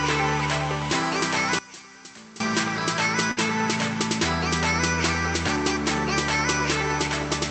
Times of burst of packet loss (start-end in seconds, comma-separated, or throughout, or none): 3.31-3.40